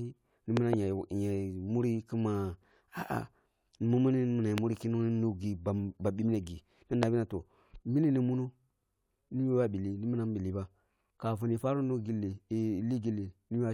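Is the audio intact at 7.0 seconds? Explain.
No. From 7.03 to 7.05 s a single sharp loud pop, far louder than the speech, cuts in just before "na toh mini ni", likely a sudden voltage pulse added to the signal.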